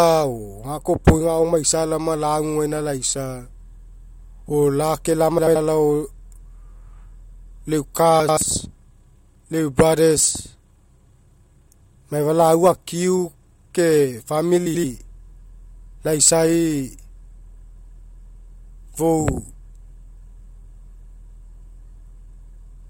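Frames out of order: pairs of neighbouring blocks of about 85 ms were decoded in swapped sequence, which fits runs of four frames each, at 5.39–5.56 s (after "o lake"), 8.20–8.37 s and 14.66–14.84 s (after "akiu ke"). Each stretch plays its halves exchanged, giving a garbled flutter, without losing time.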